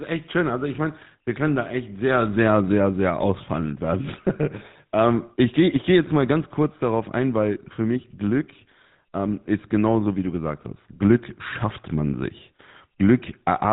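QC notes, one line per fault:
Throughout: GSM full-rate codec. The speech carries a buzzy, gravelly roughness, plainly audible, because the vocal tract is rebuilt from a coarse pulse excitation at about 13 kbps. A spectrogram shows nothing above 4 kHz and smeared, grainy harmonics.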